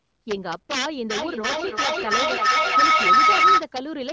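Violent cracks flip through the loudest peaks of the speech from start to finish: integer overflow, with levels driven about 8 dB too hot wrapping to the opposite sign instead of limiting. From 1.1 to 3.69 s a howl near 1.5 kHz swells, with the loop repeating roughly every 0.3 s and peaking about 11 dB above the speech. This is feedback howl, a microphone-to-loudspeaker loop that gains level on each trip.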